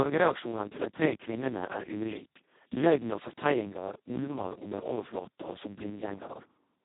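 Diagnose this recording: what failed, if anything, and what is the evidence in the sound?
The failure is at the codec stage, and it's Speex codec damage running the whole way through. The speech sounds hoarse and buzzy, edging into robotic, with the harmonic detail smeared into a rough, noise-like texture. Nothing comes through above about 3.9 kHz, so it's narrowband. That near-vocoder character suggests Speex run at its bottom quality setting, around 2 kbps. At that rate CELP has almost no bits left to code the excitation properly.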